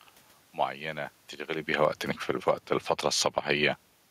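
From 1.65 s to 3.41 s the speech sinks by about 8 dB, and the room noise sinks with it. This is automatic gain falling: the gain control judged the input too loud, or its background too noisy, and lowered its gain.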